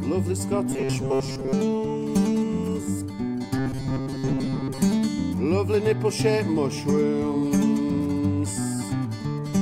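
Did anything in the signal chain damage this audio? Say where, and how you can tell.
Yes. From 0.70 to 1.54 s and again from 3.57 to 4.82 s, the sound collapses into a rigid metallic buzz at 134 Hz. This is robotic sound from repeated short buffers, most likely a driver or buffer underrun. A segment of about 7.5 ms is replayed over and over while most of the real audio is skipped. A spectrogram shows evenly spaced harmonic stripes at multiples of 134 Hz, and the waveform shows the same short cycle copied end to end.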